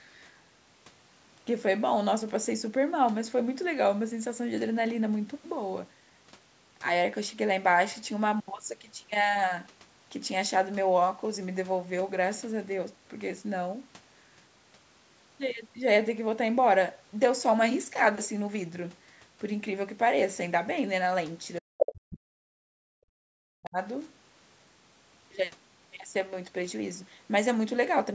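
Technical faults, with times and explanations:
21.58–22.76 s, speech suppressed in double talk: the voice drops deeply, roughly 40 dB, in pieces, likely an echo canceller muting both talkers at once.
21.79–21.92 s, other side's voice leaking through: a brief scrap of a second voice, about as loud as the talker, likely loudspeaker echo the canceller failed to remove.
23.06–23.78 s, speech suppressed in double talk: again the voice sinks by roughly 40 dB, likely overlapping talk confusing the echo canceller into turning everything down.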